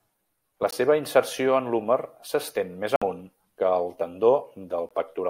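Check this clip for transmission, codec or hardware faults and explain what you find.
The speech has three Bluetooth dropouts, likely from wireless packets arriving too late for the headphones and being discarded. Playback goes briefly silent, then resumes as if it had kept playing. The first is at 0.71 s, a gap of about 19 ms just before "seva inserció en l'húmer". The second runs from 2.96 to 3.02 s, a 56 ms hole between "en l'húmer s'estén més" and "amunt que", consistent with several consecutive packets lost. The third is a gap of about 19 ms at 4.89 s.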